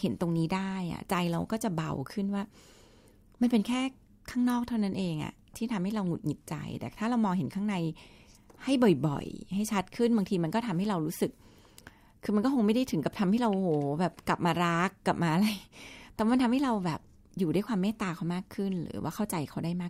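Speech recording, no technical faults found.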